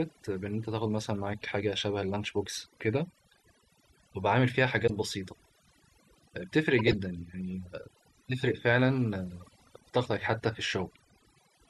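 Overdone noise removal runs through the whole speech clip. The denoiser pushed individual frequency bands down or out whenever they sat close to its noise estimate, taking the quieter parts of the voice along with the hiss. The background drops to near silence dotted with twinkling specks. On a spectrogram the gaps between words look almost black, scattered with isolated bright dots, and the harmonics break into patchy, ragged strands.

At 4.87 to 4.90 s a corrupt frame was decoded. Damaged bits in what sounds like a couple of adjacent compressed frames were played anyway, so misread codes and gains put energy at the wrong frequencies. The result is a sharp error peaking at about -20 dBFS. On a spectrogram it shows as a short vertical block of misplaced energy. The waveform shows a brief, unnatural spike.

From 6.76 to 6.94 s compressed frames are skipped. Roughly 20 ms of audio never plays, and the sound jumps ahead by a whole number of frames. 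The spectrogram shows a seam where the harmonics don't line up across the gap.

At 9.41 to 9.49 s a second corrupt frame was decoded, spread across roughly three frames but much fainter, near -45 dBFS. It comes through as a faint error. On a spectrogram it appears as a weak, out-of-place smudge.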